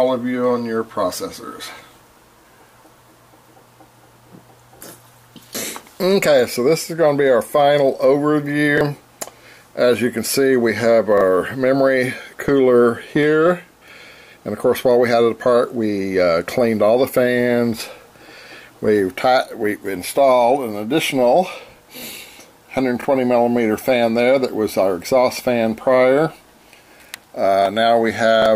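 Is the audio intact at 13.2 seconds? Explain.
No. At 13.23 s there is a single sharp click. This is most likely dropped samples. A tiny run of samples, well under a millisecond, went missing from the stream. The waveform jumps straight from one value to a later one, and that sudden step is the click. The gap is far too brief to remove any audible sound. It shows on a spectrogram as a thin vertical line across the frequencies.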